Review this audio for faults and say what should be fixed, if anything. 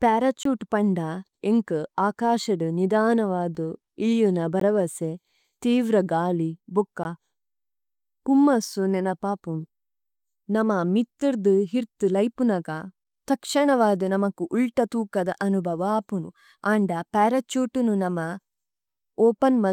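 The program likely failed repeatedly to fill its output buffer in time, leaving blocks of digital silence in the speech: 0.43 to 0.45 s, and brief dropouts at 3.55, 4.60, 7.04 and 12.38 s. The 3.1 ms and 5.3 ms gaps come across as ticks or dips; the 5.3 ms gap fits a 256-sample buffer. Raise buffer size or audio-thread priority so output is always ready before playback.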